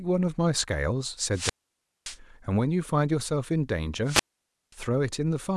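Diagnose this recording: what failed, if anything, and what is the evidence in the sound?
The wireless microphone's analogue FM link faded twice, letting the receiver's squelch mute the output: a wireless microphone squelch dropout. From 1.31 to 2.18 s and 4.05 to 4.75 s, hiss rises briefly, then near silence lasts 0.57 s and 0.53 s before speech returns.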